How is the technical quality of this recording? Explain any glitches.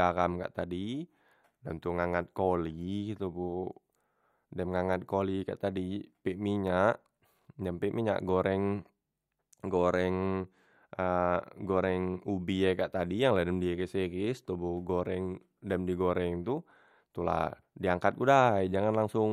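Listening to the whole recording, nothing stood out as a technical glitch.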